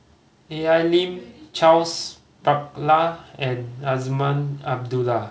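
Speech, with no technical faults to be heard anywhere in it. It has come through a call path, and nothing reaches above 8 kHz, which points to a wideband call codec such as G.722.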